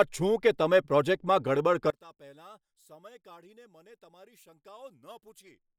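From 1.90 s to the end at 5.79 s, the speech collapses by about 27 dB into a faint residue, likely one channel inverted and cancelling on mono summing. Unlike a plain level drop, nearly everything vanishes, background included, leaving only the small mismatch between the channels.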